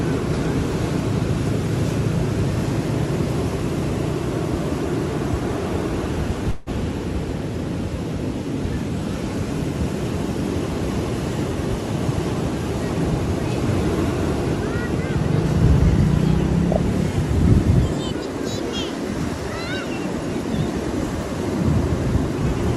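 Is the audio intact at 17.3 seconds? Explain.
Yes, at 17.3 seconds the audio plays through intact, with no dropout, glitch or other fault at that moment.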